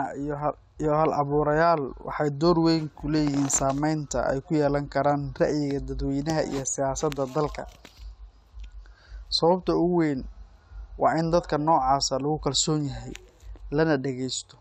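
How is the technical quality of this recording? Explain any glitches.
No glitches or faults detected.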